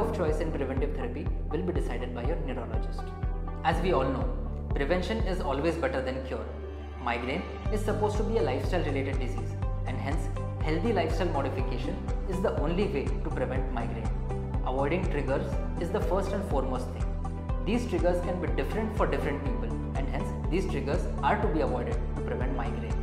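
No technical faults are audible anywhere in this audio.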